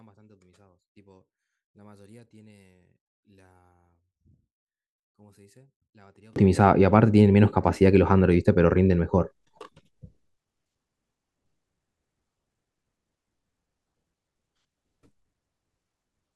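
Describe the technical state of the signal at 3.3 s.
At 3.3 s the speech has nearly disappeared, down by about 36 dB, and this runs from the start to 6.36 s. The likely cause is one channel inverted: both sides carry nearly the same signal, so summing to mono cancels almost everything, leaving only a faint residue.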